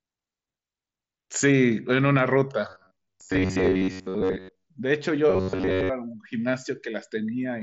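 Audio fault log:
2.69 to 4.68 s and 5.30 to 5.89 s, robotic sound from repeated short buffers: audio likely arrived too seldom, so a snippet of about 10.7 ms kept being replayed while most real speech was skipped, stamping a rigid metallic buzz at 93.8 Hz over the speech, which stays band-limited to 7.7 kHz by the mSBC headset link.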